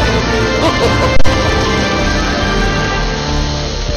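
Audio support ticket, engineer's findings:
Phantom power thump at 1.16–1.31 s: deep low thump overloading the input, decays in about 32 ms. Supply switched on or off on a live input, step punching through the coupling caps.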